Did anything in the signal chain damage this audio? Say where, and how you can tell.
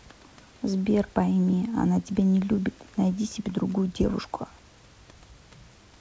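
No, nothing in the chain damaged this speech.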